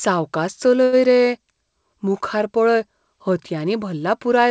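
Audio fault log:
0.84–0.95 s: short stall from a late packet. A packet arrived late, the jitter buffer ran dry, and the receiver stretched the preceding speech for 87 ms until the data caught up. Playback then resumed from the same point, so nothing is lost, but the sound just before the gap is held too long with a faint buzzy, slightly dipped quality. Everything after it plays 87 ms later. The path is wideband-limited, with nothing above 8 kHz, consistent with G.722.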